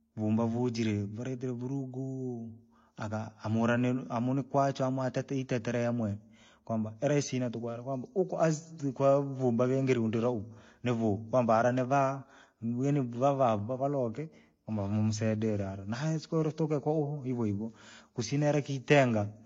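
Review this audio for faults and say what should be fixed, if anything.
Throughout the speech, the audio was likely encoded twice with lossy codecs, first as MP3 and then re-encoded as HE-AAC, at rates consistent with 48 kbit/s and then 32 kbit/s. The second encoder spends its limited bits reproducing the first one's artefacts and adds its own, so two layers of coding damage are heard together, and the top end stops at the lowest cut-off in the chain. To prevent this, encode once from the original uncompressed or lossless source rather than converting one lossy file into another.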